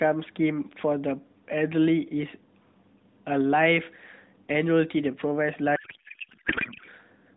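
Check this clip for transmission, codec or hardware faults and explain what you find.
One fault is present: a codec payload misread from 5.76 s to 6.88 s. The receiver appears to parse octet-aligned AMR frames as bandwidth-efficient, so every field lands a few bits off. The decoder still produces output, but the speech turns into garbled noise and warble that barely tracks the original. The problem persists until the packing formats agree. Around this stretch, the narrowband AMR path shows only light coding damage, with audio limited to below 4 kHz, which fits AMR-NB, here running at 12.2 kbps.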